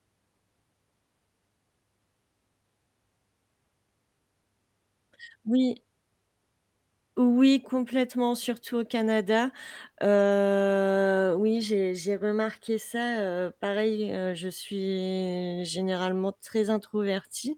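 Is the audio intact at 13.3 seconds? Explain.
Yes, the speech is intact at 13.3 seconds, with no fault audible at that moment.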